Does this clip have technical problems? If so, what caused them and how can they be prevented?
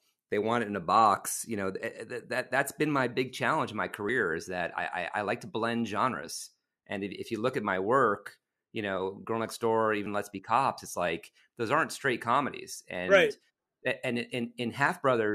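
Yes. An overlap between stream segments cuts a few milliseconds at 4.09 s (after "big challenge in my") and 10.06 s (before "let's be cops it's"). Each causes a tiny click or skip, seen as a waveform step and a thin vertical broadband line. The roughly 6 s spacing fits 6-second segments whose time stamps overlap, so the player trims audio that was never duplicated. Generating contiguous, non-overlapping segment time stamps prevents this.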